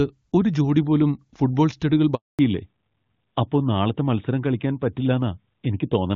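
At 2.15 s, right after "ജോടി പോലും ഫുട്ബോൾ സ്റ്റഡുകൾ", the speech stops for 240 ms until 2.39 s. This is a handover gap: the call was passed from one network to another, and no speech frames were delivered while the new link came up. The voice fades out within a few tens of milliseconds instead of being chopped mid-syllable, and the gap is true silence rather than comfort noise or a repeated fragment, which sets it apart from ordinary packet loss with concealment.

From 2.39 s to the end, there is a fallback to narrowband. Before the handover, HD Voice at a rate that fits AMR-WB 23.85 kbit/s carries clean, bright speech. Afterwards the call is on an older narrowband codec, consistent with AMR-NB 12.2 kbit/s, and nothing above 4 kHz survives. Sibilants lose their hiss and the voice sounds duller and rougher. Unlike a brief bandwidth dip or a low-pass filter applied to the whole clip, this begins sharply at the gap and persists for the rest of the recording.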